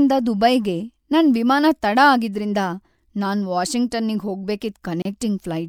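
At 5.02 s the speech drops out for about 32 ms, a brief hole in otherwise continuous sound with edges smeared by the codec, before it resumes at 5.05 s exactly where it left off. This is a gap at a join of encoded pieces: the audio was encoded as separate segments and spliced without trimming, so the encoder's start-up delay and the padding of the previous segment's final frame both remain as silence.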